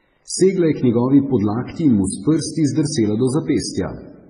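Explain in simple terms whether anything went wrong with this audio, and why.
Something did go wrong: across the whole clip the speech carries two layers of compression damage at once, which points to transcoding between lossy codecs. It was likely squeezed into an MP3 first and then re-encoded as HE-AAC. The second encoder wasted effort preserving the first one's artefacts while adding its own. Nothing above about 10.4 kHz survives, so the very top of the sound is missing.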